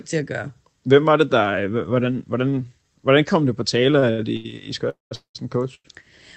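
From 3.99 to 4.53 s the speech drags and stutters: four brief hitches, the longest 80 ms, together about 0.2 s of patched-in sound, roughly 37% of that stretch. These are repeated stalls (stutter). Packets kept arriving late, so the jitter buffer ran dry each time and the receiver extended the last sound until it could resume. Nothing is lost, only delayed.

Two call audio freezes follow, 4.89 to 5.13 s and 5.15 to 5.37 s. In each, a fading buzz trails off into silence, about 150 ms in the first and 120 ms in the second, and then the speech picks up exactly where it stopped. The likely cause is packets held up in transit. Each wait, 216 ms and then 197 ms, emptied the buffer and inserted a gap without dropping any audio.

At 5.75 to 5.87 s a sound is held about 98 ms too long, with a faint buzzy sag. This is a short stall from a late packet. One packet missed its slot, and the receiver stretched the previous sound until the packet arrived. 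The call path's Opus coding, consistent with about 24 kbps, leaves its usual coding noise and an upper limit near 8 kHz.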